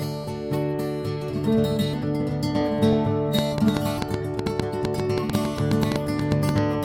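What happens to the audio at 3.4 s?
At 3.39 s a train of clicks begins and runs to 6.59 s. It sounds like a ticking, popping pattern laid over the music at about 7.2 clicks per second, spaced irregularly, some twenty in all. The pulses share much the same shape and stand out at roughly 15 dB above the music. The likely cause is an outside source such as interference from nearby equipment or a faulty connection or power supply, repeatedly injecting short pulses into the signal.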